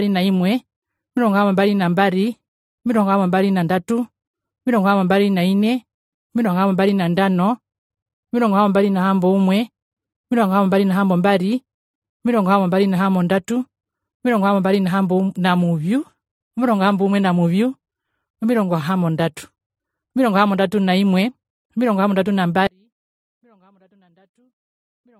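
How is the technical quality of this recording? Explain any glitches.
The recording has two faults. One colours the whole speech clip, and one cuts it off near the end.

Transcoding between lossy codecs is present throughout. Nothing is heard above 16 kHz. Two kinds of smeared, swirly artefact sit on top of each other. The sound points to an MP3 encode around 52 kbit/s, likely re-encoded as AAC-LC near 48 kbit/s. The second codec wasted bits on the first codec's damage.

An audio dropout to a faint residue starts at 22.67 s and lasts to the end. The speech drops out abruptly, not as a fade. Only a faint leak of the sound remains, about 40 dB down. The signal was likely lost while the path after the break stayed live.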